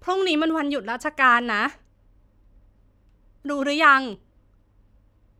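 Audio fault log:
0.50 s and 4.13 s, dropped samples: two isolated sharp clicks in the speech, likely a fraction of a millisecond missing, making the waveform jump abruptly.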